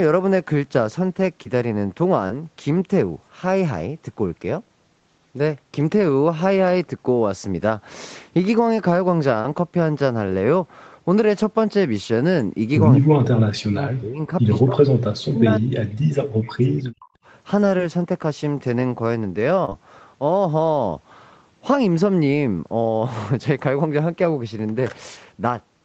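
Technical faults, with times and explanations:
1.43 s: short concealed packet loss. About 20 ms was synthesized from the preceding sound, heard as a brief smear. The spectrogram shows a blurred, repeated slice, and the waveform has a small seam.
2.27 s: short concealed packet loss. About 20 ms was filled by continuing the last sound, giving a tiny wobble. The spectrogram shows a smeared 20 ms patch where detail stops.
9.42 s: short concealed packet loss. The receiver extended the previous sound across a 20 ms gap, producing a brief smear. The spectrogram shows a copied, blurry sliver with softened transitions.
19.65–19.73 s: short concealed packet loss, two back-to-back 20 ms gaps. Both patches are filled with continued sound and become a smear. The spectrogram shows a doubled blurred band.
12.96–14.35 s: speech suppressed in double talk. The level sinks by up to about 40 dB, likely because the echo canceller turned the talker down while both sides spoke. 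The waveform envelope collapses.
14.61–17.16 s: speech suppressed in double talk. The speech dips by up to about 40 dB, likely because the echo canceller muted the talker during overlapping speech. The waveform shows shrunken segments.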